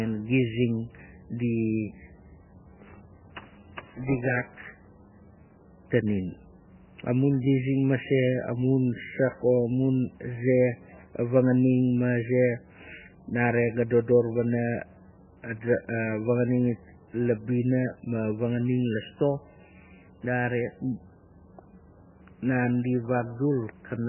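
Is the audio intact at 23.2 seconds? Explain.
No. At 23.2 s, as throughout the clip, the speech sounds dull and watery, with nothing above 3 kHz, swirling tones and smeared consonant attacks. This is likely heavy MP3 compression at a very low bitrate, around 9 kbps, where starved frequency lines drop in and out between frames.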